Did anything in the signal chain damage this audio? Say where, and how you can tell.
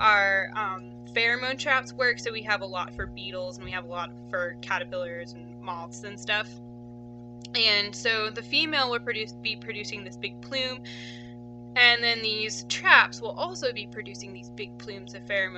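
Yes. The damage happened in the analogue wiring, before conversion. A steady low tone at 60 Hz runs under the whole clip, from start to finish. That is mains hum. It sits roughly 15 dB below the signal. The cause is the power line leaking into the signal path, through either a ground loop or a nearby transformer.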